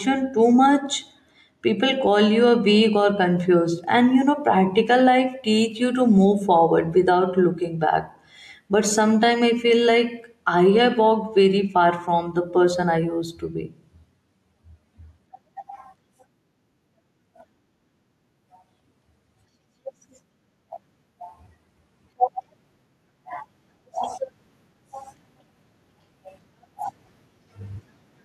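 Speech recording with gain pumping from start to finish. The level ducks whenever the talker gets loud, with a swing of about 10 dB. Loud and quiet passages sit unnaturally close in level, so the delivery sounds squashed. The likely cause is input gain set far too high, with a fast limiter or compressor clamping down on every loud peak.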